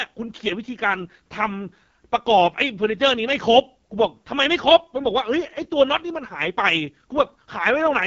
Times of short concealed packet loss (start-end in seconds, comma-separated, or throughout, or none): none